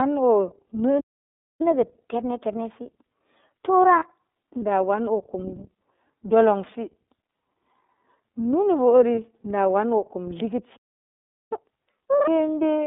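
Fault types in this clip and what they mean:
iLBC codec: narrowband coding passes only about 250 Hz to 3.7 kHz, so the spectrogram is blank above 3.7 kHz, and speech sounds slightly rough and synthetic.
catch-up at higher speed: from 1.61 to 4.61 s, playback runs 1.15 times fast and pitch rises about two semitones, with harmonics shifted upward and waveform events compressed.
lost iLBC frames: 30 ms losses at 3.99 s and 9.15 s are filled with a repeated pitch cycle and noise, showing as brief, uniform, buzzy patches.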